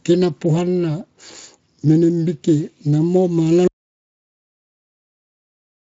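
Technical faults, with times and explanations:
3.68 s to the end, audio dropout to silence: the speech cuts off mid-flow and the last 2.3 s is dead digital silence with no room tone at all. The input was likely lost or muted while the recorder kept writing silence.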